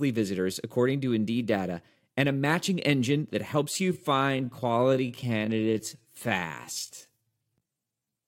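Speech, with a time-stretched section from 3.67 s to 8.28 s after "matching engine that": pace abruptly slows to 0.65x at unchanged pitch, dragging, likely from software stretching. A spectrogram would show elongated harmonics.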